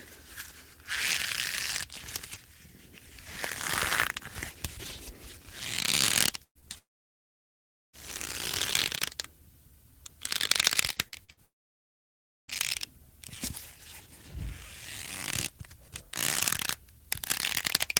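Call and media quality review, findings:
Burst of packet loss, 6.43–6.58 s. About 0.12 s of audio gone; receiver extends the last sound, then fades it out, with roughly 90 ms near silent before audio resumes further on. Jitter buffer/PLC path.

Short concealed packet loss, 6.59–6.65 s. Brief smear right after the burst; about 40 ms missing, about 30 ms bridged by decoder concealment continuing the prior sound, then crossfaded back into real audio.

Long network dropout, 6.78–7.96 s and 11.45–12.51 s. Audio trails off into silence for over a second each time (about 1.16 s and 1.04 s missing), then returns later with the intervening stretch lost. Likely a transport-level outage, with concealment giving up after the fade.

Repeated packet loss (robotic sound), 10.93–11.40 s. Choppy texture from four separate gaps, longest 46 ms, about 0.16 s missing in total; roughly a third of the span is concealed, each patch running into the next hole.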